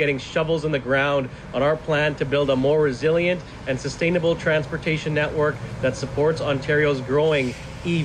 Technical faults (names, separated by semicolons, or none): overlap between stream segments